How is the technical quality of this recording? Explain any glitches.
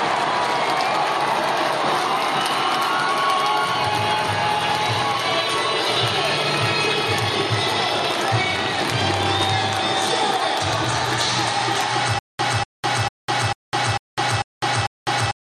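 The recording breaks down near the end with a stutter with silent gaps. From 12.19 s until the end, a fragment of about 243 ms repeats seven times, each copy followed by about 203 ms of digital silence, a cycle of roughly 446 ms. The likely cause is a stalled player or stream that replays its last buffered piece on each retry and then runs dry, so the audio meant for that stretch is lost. It sounds like a rhythmic, hiccuping loop. The waveform shows identical blocks separated by flat, near-silent lines, and the spectrogram shows repeated matching patches with fully blank columns between them.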